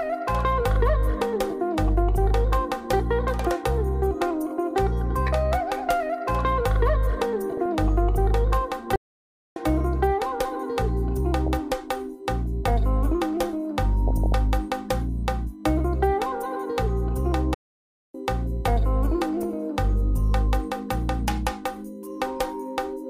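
A steady USB whine at 1 kHz runs under the whole clip, around 40 dB below the programme. It is a thin, fixed-pitch tone that never moves with the material. Its 1 kHz pitch matches the 1 ms frame rate of a USB bus. Current drawn in those frames is leaking into the audio through the power or ground, so the whine reflects the interface hardware rather than the recording.

From 7.57 to 7.66 s there is a short burst of DAB burbling. For under a tenth of a second the audio turns wet and bubbly. Weak reception let a small fraction of a percent of bits slip past error correction. The corrupted samples put short blips of noise into individual sub-bands.

At 8.96 s the output drops to silence for 0.60 s, a playback stall, before resuming at 9.56 s. The sound cuts off mid-flow instead of fading, which points to a likely buffer underrun or a blocked playback thread.

DAB burbling returns from 11.46 to 11.59 s and again from 14.08 to 14.34 s. 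The second episode is the longest, at about a quarter of a second. Both have the same burbling texture and come from the same uncorrected bit errors spreading across several frames.

A second playback stall runs from 17.54 to 18.15 s. The gap is again 0.60 s of silence, with an abrupt stop and restart.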